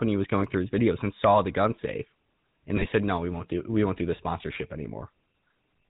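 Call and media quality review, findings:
GSM full-rate codec, whole clip: buzzy, gravelly speech with nothing above 4 kHz, codec damage plainly audible. The pulse-driven vocal-tract model sounds consistent with 13 kbps full rate. Unlike a plain low-pass, the roughness is in the excitation itself.

GSM bit errors, 2.77–2.90 s: brief squawk and gargle, pointing to several consecutive corrupted frames (error rate about 1.8%). Bad filter, pitch or gain values distort the decoded spectrum rather than leaving the gap that packet loss or concealment would.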